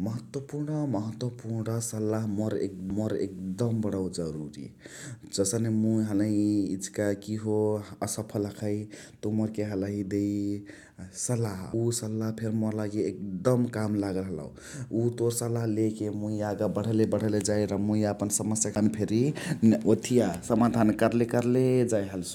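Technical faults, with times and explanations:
2.90 s, 11.73 s and 18.75 s, CD skip: each is a brief tick, a near-silent dropout of a few milliseconds (closer to 10 ms at 18.75 s), and the speech then resumes from a different place, first between "महत्वपुर्ण सलाह" and "बणौ जरुरी", then at 11.73 s, and last just after "र मुइ यापन समस्याअक". The laser loses its track on the disc's spiral, the player mutes briefly, and playback picks up on another turn of the spiral.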